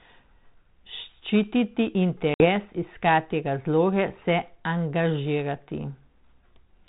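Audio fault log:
2.34–2.46 s, packet loss on an ADPCM call: the speech drops into a hard-edged hole of dead silence, about 60 ms of audio gone, which fits roughly three lost packets, and when it comes back it carries a brief roughness before settling over the next few tens of milliseconds. The gap itself was filled with silence, and because the G.726 decoder at 32 kbit/s rebuilds each sample from an adaptive prediction and step size, missing packets leave it out of step with the sender until it resynchronises.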